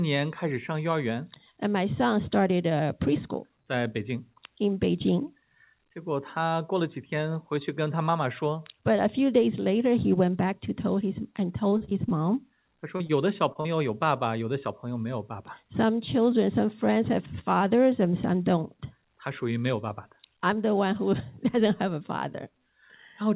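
From 11.7 to 12.12 s there is repeated packet loss with a robotic sound: five gaps, the longest 32 ms, each patched by continuing the last sound, so about a quarter of that stretch is filler. It sounds choppy. On a spectrogram it shows as repeated smeared, striped blocks, and the waveform shows short repeating cycles.

Short concealed packet loss then follows at 12.96, 13.07, 13.53 and 13.61 s. Each hole of 20 to 40 ms is bridged by extrapolated sound and blended back, giving brief smears or wobbles. On the waveform these appear as tiny flattened, overly regular patches.

Throughout, the spectrogram stops at 4 kHz, which fits a narrowband G.711-style call path.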